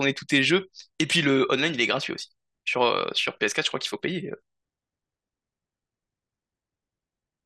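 No technical faults can be heard anywhere in this recording.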